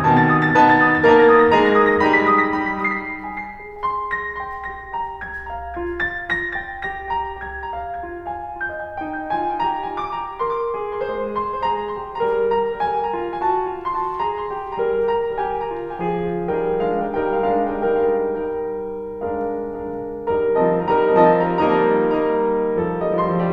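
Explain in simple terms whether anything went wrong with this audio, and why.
Throughout the music, a second copy of the whole sound trails the original by about half a second, only somewhat quieter. This is a doubled audio track, likely from the signal being recorded twice, once through a slower route.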